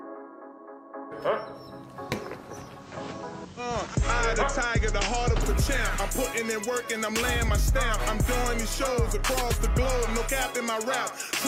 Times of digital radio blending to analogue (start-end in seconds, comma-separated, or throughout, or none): 2.75-5.50